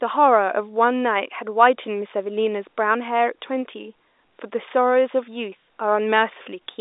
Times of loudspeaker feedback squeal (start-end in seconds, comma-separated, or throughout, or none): none